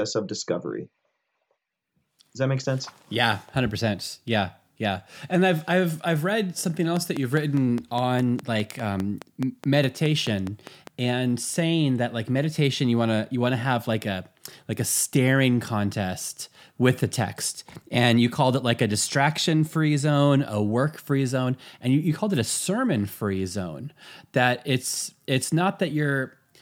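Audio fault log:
6.97–10.88 s, train of clicks: after "I've I've read something", some twenty evenly spaced pops at 4.9 per second stand well above the speech, likely from nearby equipment interference.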